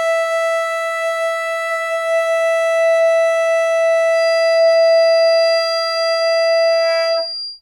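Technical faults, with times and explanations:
4.09 to 7.62 s, feedback whistle: A thin, steady tone at 4.8 kHz appears behind the music and lasts to the end. It sits roughly 10 dB below the music and swells and fades slowly. The likely cause is a loudspeaker-to-microphone loop balanced at the edge of feedback, sustaining one frequency without growing.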